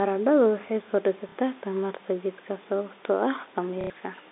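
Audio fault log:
1.29–1.35 s and 3.81–3.90 s, packet loss with last packet repeated: 60 ms and 90 ms gaps filled by replaying the last packet, a fit for 30 ms packets. Each run is a robotic stutter buzzing near 33 Hz, seen as repeated identical waveform blocks.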